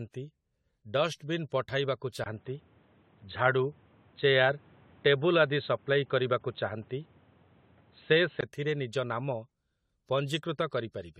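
From the start, the speech carries generation loss. It sounds swirly, smeared and hollow, with blurred attacks and nothing above 16 kHz. Likely cause: the audio went through AAC-LC at 64 kbit/s around seven times, each pass adding fresh quantisation damage on a shifted frame grid.

At 2.24 s, after a 20 ms silence, the input switched to a poorer device. The sound turns dull and boxy, with nothing above 4.1 kHz. The level shifts by about 5 dB, and new background noise sits about 35 dB below the speech. Full band returns at 8.43 s. This is likely a change to another microphone or a headset's call profile.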